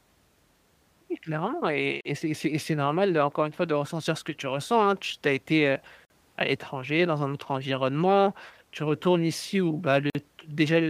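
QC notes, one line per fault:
2.01–2.05 s, 6.05–6.10 s, 10.10–10.15 s: gap at a join of encoded pieces. The speech drops out for about 42 to 49 ms every 4 s, then carries on where it stopped. The 4 s pieces were joined without trimming the encoder's leading delay and last-frame padding, so smeared silences appear at each seam.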